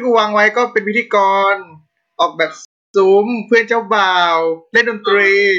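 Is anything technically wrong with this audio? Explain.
Yes. A rebuffering stall occurs from 2.65 to 2.94 s. The player ran short of downloaded audio and paused. The speech drops to silence for about 0.29 s. It then resumes exactly where it stopped. Nothing is lost. The gap only adds time.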